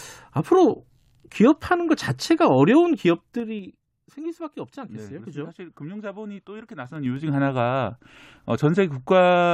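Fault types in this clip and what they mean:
Zipper noise: the speech level moves in unsmoothed 3 dB jumps, each leaving a small click. From 2.92 to 3.88 s it drops about 15 dB at roughly five steps a second, and from 6.8 to 7.32 s it rises about 15 dB at around ten a second, producing a ticking zip over the sound. A waveform shows a staircase-shaped envelope; a spectrogram shows thin vertical broadband lines at each step.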